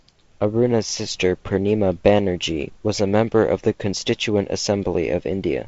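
A speech clip with nothing technically wrong with it.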